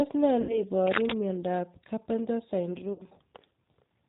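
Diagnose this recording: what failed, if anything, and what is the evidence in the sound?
Speech sounds slightly rough, synthetic and band-limited to 4 kHz throughout. This is the G.729 codec at the codec stage, rebuilding the voice from a filter and sparse pulses at 8 kbit/s.

At 0.41–0.61 s and 2.93–3.03 s the sound smears into a fading buzzy tone or coloured noise. This is VoIP packet loss concealed by the speech codec: the network dropped about 80 ms and 60 ms, the decoder extrapolated, and recovery lagged.

From 0.85 to 1.17 s a dense, uneven scratching rides over the speech, louder than it. This is cable scratch noise in the analogue wiring, likely from a worn cable or connector being moved.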